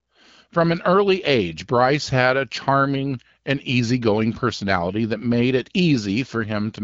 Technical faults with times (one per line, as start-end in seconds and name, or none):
6.33-6.81 AMR rate drop